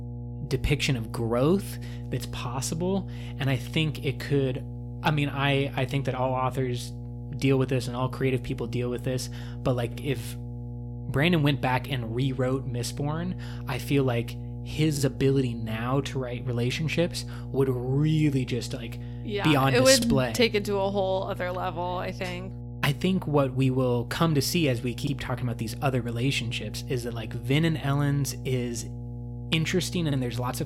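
A ground loop or nearby transformer is leaking the 60 Hz power line into the recording, producing mains hum: a steady low drone with some low harmonics that runs under the speech for the whole clip, sitting only about 10 dB below it.

The audio was also processed in 5-second overlapping chunks, each starting before the previous one finished, so about 50 ms is played twice at every join. This causes a brief click or stutter at 9.92, 14.97, 20.02, 25.07 and 30.12 s.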